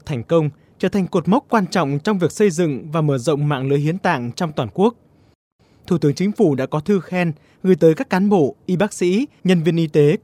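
No technical faults can be heard anywhere in the audio. Nothing in the sound points to a break, distortion or other problem at any moment.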